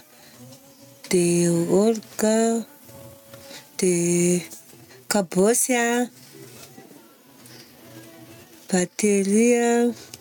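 The input gain was likely set far too high for the microphone, so a fast limiter clamps down on every loud moment of this speech clip. The result is gain pumping throughout, with swings of around 10 dB, leaving the speech squashed and flattened in dynamics.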